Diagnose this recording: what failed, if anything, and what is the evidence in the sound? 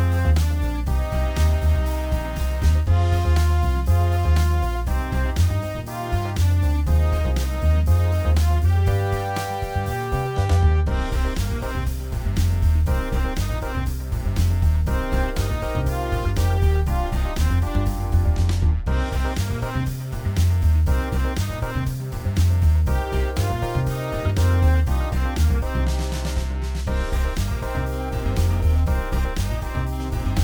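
Nothing failed; no stage shows a fault.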